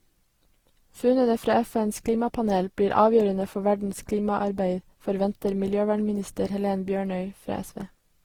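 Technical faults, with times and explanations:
Throughout, generation loss: the speech has a swirly, smeared, hollow quality, with consonant attacks blurred, and it sounds worse than a single pass at a decent rate would leave it. Likely the audio went through a lossy codec around seven times, with character pointing to Opus at about 48 kbit/s. Each re-encode quantises on a shifted frame grid, so noise piles up, even though content still reaches 20.3 kHz.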